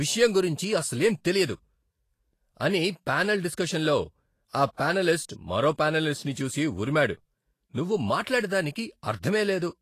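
Lossy encoding at a low bitrate, likely Vorbis compression, runs through the whole speech clip. The encoder removes everything above 14.2 kHz and quantises the remaining treble so coarsely that fine detail turns into noise of similar energy. The damage is plainly audible from start to finish: sibilants and upper harmonics sound hissy and grainy, tones are roughened, and consonant attacks are blurred, which fits a bitrate of around 33 kbps.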